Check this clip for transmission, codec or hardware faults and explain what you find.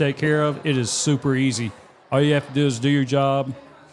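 I found no faults to explain in the clip.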